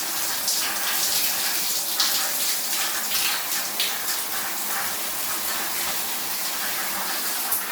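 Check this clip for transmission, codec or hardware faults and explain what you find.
Nothing to report: no transmission, codec or hardware faults are audible anywhere in the audio.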